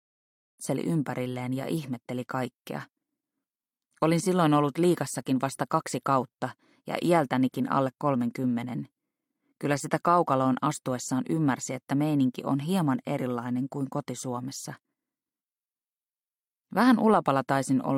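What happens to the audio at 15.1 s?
At 15.1 s the audio is intact, with no fault to be heard at that moment.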